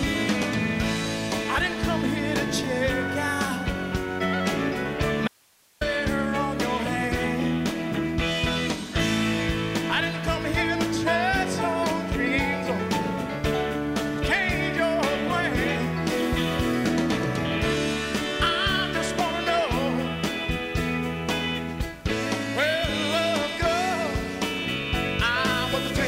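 At 5.28 s the sound cuts out abruptly, mid-flow, and stays gone until 5.81 s, a gap of about 0.53 s. It is not silent: a thin hiss sits in the hole, roughly 35 dB below the normal level, before the signal snaps straight back. This is an audio dropout to a faint residue, likely caused by the wanted signal being lost upstream while the path after the break stayed live and kept passing its own noise floor.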